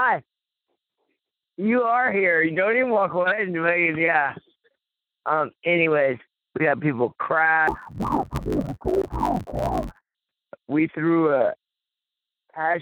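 From 7.68 to 10.16 s the sound turns dull and robotic, with a steady buzz near 92 Hz laid over it and no clear drop in pitch. This is interleaved audio read as planar: each 10.88 ms block of alternating left and right samples was split in half, each half taken as one channel. Both halves play at half speed, but because the blocks are so short, the result is a block-rate buzz rather than an octave shift.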